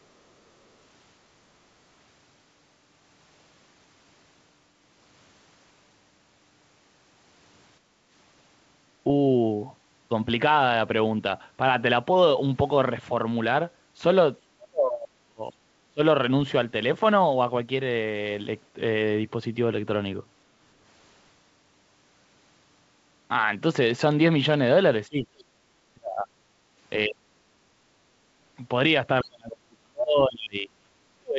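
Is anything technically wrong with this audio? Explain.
Yes, there are two echo-canceller problems in this speech. First, background gated by the echo canceller at 7.8–8.11 s and 26.56–26.76 s: while far-end audio played, the canceller clamped the mic, so the room tone dips by about 8 dB and then about 6 dB, and recovers once it releases.

Second, the speech gets suppressed in double talk at 14.49–15.58 s, 15.91–16.0 s, 25.08–26.28 s, 27.07–27.8 s, and from 29.22 s to the end. The near-end speech plunges, by up to around 40 dB. That's likely the canceller mistaking overlapping talk for echo and ducking everything.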